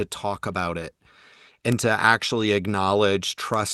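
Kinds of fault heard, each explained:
Bit error spike: a single flipped bit in a stored or transmitted sample makes its value leap by a power of two and snap straight back. You get two lone, sharp ticks, one at 1.72 s just before "to actually" (a single sample), and another at 3.54 s spanning two samples. Both are broadband clicks with no relation to the speech, sitting on top of the call-codec sound, which tops out around 12 kHz.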